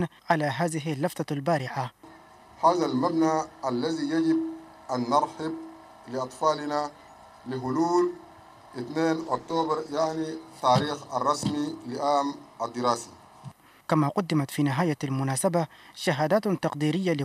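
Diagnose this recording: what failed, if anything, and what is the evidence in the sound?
A call bitrate drop in the codec stage starved the encoder, consistent with roughly 64 falling to 14 kbps; from 9.22 to 10.31 s the audio turns coarse and rough.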